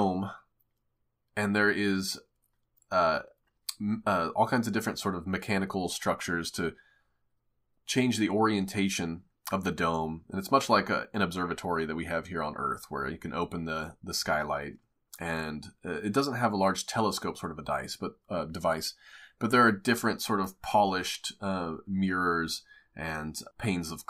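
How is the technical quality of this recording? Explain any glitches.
No technical glitches can be heard anywhere in the recording.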